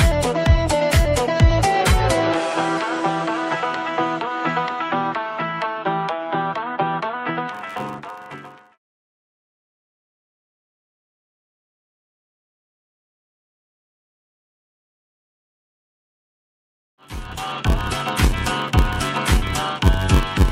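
From 7.52 s to the end, a steady buzz at about 93.8 Hz rides under the sound, which also drags, running at 0.861 times its normal speed while keeping roughly its usual pitch. This is a block size mismatch (padded): one stage hands over blocks shorter than the next stage reads, which fits a 512-sample read, and the shortfall in each block is filled with silence. Those regular gaps create the buzz at the block rate and stretch the timing.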